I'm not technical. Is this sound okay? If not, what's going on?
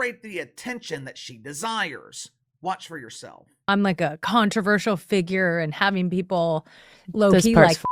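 Yes, nothing in this speech recording sounds wrong from a technical point of view. There isn't any moment in it that needs fixing or explaining.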